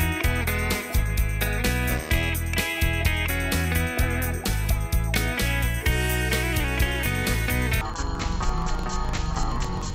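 The audio is clean until 7.81 s, when it turns an octave low, doubled and choppy through the end at 9.95 s. That is interleaved audio read as planar: each 42.67 ms block, which fits a 2048-sample block, has its alternating left-right samples split into a first and second half, so both halves play at half speed. A spectrogram shows the harmonics shifted down 12 semitones, crossed by vertical seams repeating at 23.4 Hz. The waveform breaks at each block boundary.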